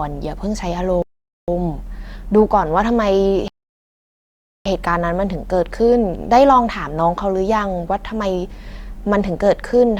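Speech with two rebuffering stalls, from 1.02 to 1.48 s and from 3.48 to 4.66 s, where playback ran dry and paused, adding about 0.46 s and 1.18 s, then resumed seamlessly. Each appears as a flat waveform and blank vertical spectrogram band.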